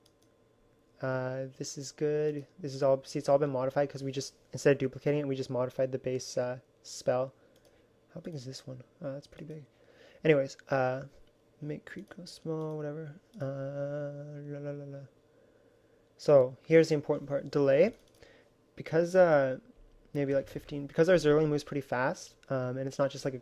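The signal holds steady throughout, with no technical faults to be heard at any point.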